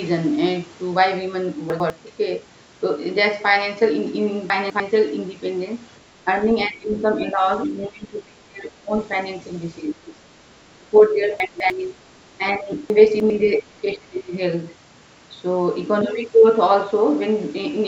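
Chunks out of order at 1.7, 4.5, 11.4 and 12.9 s in this speech recording: 100 ms blocks play one to three places late, leaving jumbled joins. Speech suppressed in double talk dips the talker at 6.68–7.03, 7.33–7.43, 7.67–8.92, 9.8–10.16, 10.77–11.27, 11.63, 12.58–12.73 and 13.43–14.33 s by up to roughly 25 dB, likely an echo canceller mistaking overlapping speech for echo.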